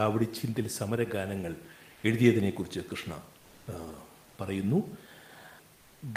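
Speech, with automatic gain rising from 0.85 to 2.63 s: voice and room noise swell together by about 3 dB over nearly two seconds, unlike a sudden step. From 3.43 to 3.67 s, the room's textured background becomes a steady, featureless hiss at the same level, likely comfort noise from discontinuous transmission, not a dropout to silence.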